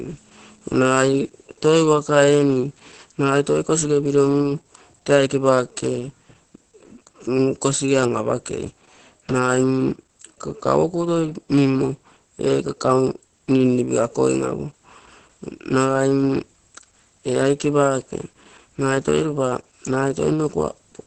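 From start to finish the speech sounds muffled, hoarse and faintly robotic, with nothing above about 8.5 kHz. This is Opus voice compression at heavy strain: the SILK linear-prediction coder, working in wideband mode, discards everything above 8 kHz and describes the excitation driving the voice only coarsely, so breathiness turns to rasp and the tone takes on a synthetic edge. The degree of damage fits a bitrate near 10 kbps.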